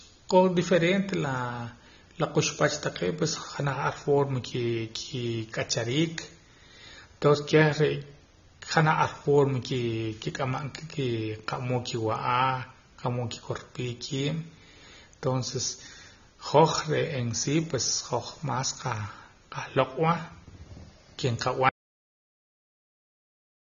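From the first moment the speech carries AAC compression damage, and it is plainly audible. Nothing is present above 6.9 kHz, so the sound is dull and lacks air. Sibilants turn fizzy and smeared. Sustained vowels warble. The likely cause is an AAC-LC encoder working at a very low rate, one that fits roughly 24 kbps. Starved of bits, it drops the top band and quantises the rest coarsely.

At 21.69 s the audio drops out to silence and stays silent to the end. The cut is abrupt. The gap is silent, with no room tone or hiss. The input was likely lost, through a disconnected device, a failed link or a mute, while the recorder kept writing empty samples. Any speech from that point on is gone.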